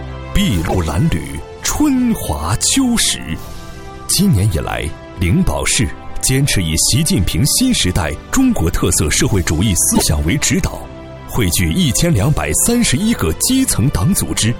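At 0.67 to 0.75 s and again at 9.94 to 10.03 s, the audio jumps ahead and garbles for about 80 ms, roughly three 26.1 ms frames. This is likely a broken MP3 bit reservoir: after frames were lost, following frames borrowed the wrong bytes.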